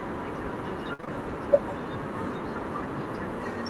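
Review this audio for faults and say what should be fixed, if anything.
Burst of packet loss, 0.93 to 1.10 s: about 60 ms of audio went missing, and the receiver stretched the last sound into a fading 52 ms fill before skipping ahead.

Short concealed packet loss at 1.01 to 1.05 s and 1.05 to 1.09 s: two back-to-back 20 ms holes were patched by extrapolating the preceding sound, leaving a brief smear inside that gap.

To prevent both, enable in-band forward error correction and a deeper adaptive jitter buffer so that late or lost packets are recovered before playback.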